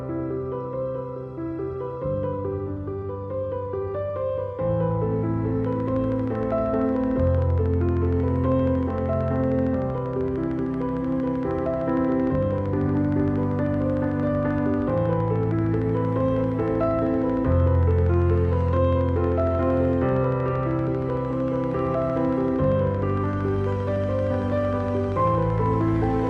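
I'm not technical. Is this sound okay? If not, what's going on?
No. From 5.65 s to 26.28 s there's a train of clicks, a steady ticking about 13 times a second, likely interference from nearby equipment or a faulty connection or power supply.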